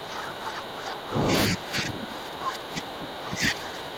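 Speech suppressed in double talk, 0.0–1.32 s and 1.48 s to the end of this speech: the level drops by up to about 15 dB, likely because an echo canceller mistook the talker for loudspeaker echo and attenuated both.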